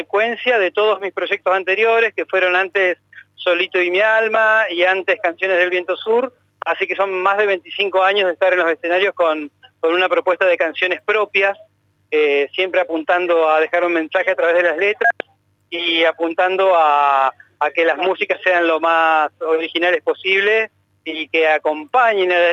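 No technical faults are audible anywhere in the audio.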